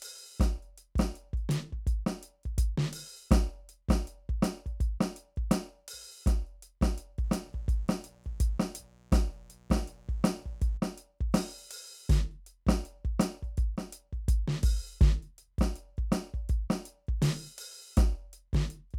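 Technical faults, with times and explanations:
7.24–10.78 s, mains buzz: a steady, raspy buzz sits under the music, roughly 30 dB below it. Sharp switching spikes from 60 Hz mains enter twice per cycle, so a dense comb of 60 Hz harmonics climbs into the kilohertz range, giving the rasp.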